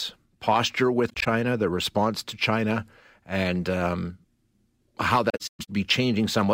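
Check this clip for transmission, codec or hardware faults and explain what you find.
AAC frame loss with muting occurs twice. From 1.09 to 1.27 s, several short dropouts; from 5.30 to 5.68 s, scattered gaps, the longest around 150 ms. The decoder zeroes the missing frames' spectrum, and the overlapping windows leave soft-edged holes.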